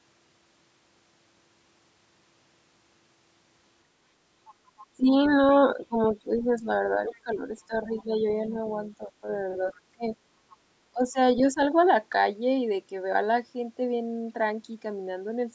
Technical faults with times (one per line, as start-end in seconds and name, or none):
4.45-6.43 other side's voice leaking through
4.96-5.13 speech suppressed in double talk
5.76-10.03 speech suppressed in double talk
7.07-7.14 other side's voice leaking through
7.92-8.02 other side's voice leaking through
8.66-8.89 other side's voice leaking through
9.71-10.57 other side's voice leaking through
10.93-11.59 speech suppressed in double talk